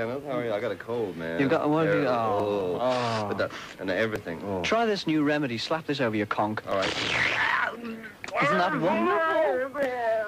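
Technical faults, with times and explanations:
No technical faults can be heard in the audio.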